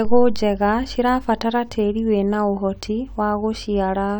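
Nothing goes wrong in this bit of speech, so there's no fault to point to anywhere along the way.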